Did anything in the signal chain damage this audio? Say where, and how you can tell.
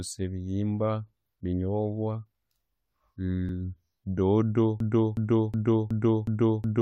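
Yes. At the network or streaming stage, the time stamps of consecutive stream segments overlapped, and the player trimmed the supposed duplicate from sound that was never actually doubled. That overlap between stream segments removes a few milliseconds and leaves a jump in the waveform, heard as a tiny click or skip at 2.50 s and again at 3.49 s. The one-second spacing matches segment boundaries arriving every second, which is how you can tell it comes from stream stitching.

From 4.80 s to the end, the audio turns into a broken-record loop. The same fragment, about 0.37 s long, repeats exactly and back to back, six times, with no new material in between, so whatever should have played in those final two seconds is lost. The likely cause is a stall in the player, encoder or stream that kept resending the last fragment still held in its buffer.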